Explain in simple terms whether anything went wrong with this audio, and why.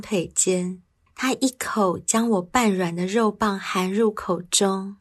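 Listening closely to the speech in this recording, nothing went wrong that stood out to the ear.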